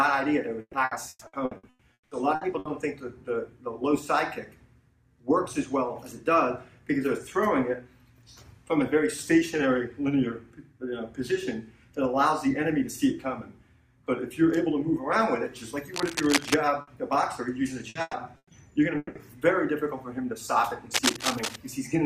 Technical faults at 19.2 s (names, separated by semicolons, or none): long network dropout